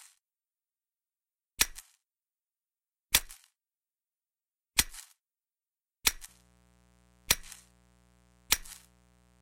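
Everyday sound; from 6.29 s to the end, a raspy mains buzz, roughly 30 dB below the signal, shows as evenly spaced horizontal lines at 60 Hz harmonics reaching several kHz, from switching spikes.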